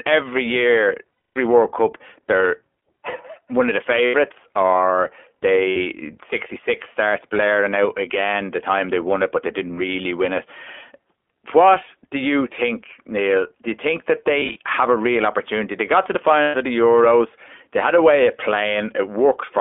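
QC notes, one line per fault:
Throughout, iLBC codec: nothing above 3.4 kHz or below 300 Hz survives. Each frame is likely coded alone, which fits 20 ms frames at 15.2 kbps, giving a plainly audible rough, synthetic edge. On the spectrogram, energy stops flat at 3.4 kHz with smeared harmonics.
1.12–1.37 s, 4.06–4.16 s (after "one of the"), 5.70–5.77 s, 14.40–14.57 s (between "you think that" and "have a real opportunity"), 16.42–16.56 s (between "got to the" and "of the"), lost iLBC frames: each dropout becomes a held, buzzy vowel. The decoder repeats the last pitch cycle mixed with noise, and at 1.12 s it fades over the 240 ms gap. At 14.40 s the losses are scattered in short runs. On the waveform, repeating pitch periods with added noise appear, and sound snaps back cleanly afterward.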